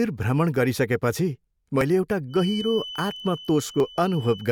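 A tiny skip at 1.81 s comes from an overlap between stream segments: two 2.0 s segments overlap in time, so the player trims real speech and the waveform jumps. From 2.27 s to the end, a thin 3 kHz tone that slowly swells and fades sits well below the speech. This feedback whistle likely comes from a loudspeaker-to-microphone loop held just at the edge of ringing. The same segment-overlap skip recurs at 3.80 s.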